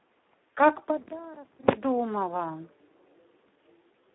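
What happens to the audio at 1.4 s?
At 1.4 s the speech carries Speex codec damage, present throughout the clip. Too few bits for the CELP excitation make it hoarse, noisy and near-robotic, which fits a low setting around 8 kbps. A spectrogram shows energy confined to roughly 250 Hz to 3.5 kHz, with nothing above 3.8 kHz.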